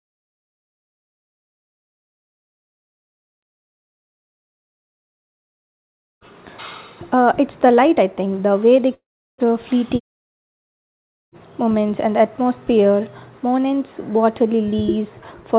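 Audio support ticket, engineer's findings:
8.94 to 9.47 s, right after "think the way they": audio stops, tail smeared into a fading buzz, then about 0.37 s of dead silence before resuming slightly late. Likely a long network dropout: roughly 0.4 s never arrived, concealment ran out. Band-limited to 4 kHz, consistent with G.711 mu-law.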